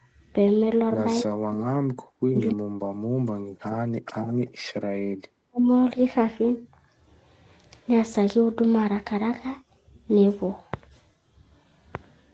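Speech suppressed in double talk occurs at 1.23 to 1.72 s, 1.89 to 2.03 s, 2.28 to 4.46 s and 5.09 to 5.67 s. The speech plunges, by around 40 dB at worst, with the longest stretch lasting about two seconds. With both ends talking at once, the echo canceller likely could not separate the near talker from the loudspeaker echo and turned both down.

Background gated by the echo canceller comes at 4.74 to 4.81 s. The room sound drops by about 26 dB for roughly 70 ms, then returns. The canceller clamped the microphone hard while the far end's audio played through the loudspeaker, then let go.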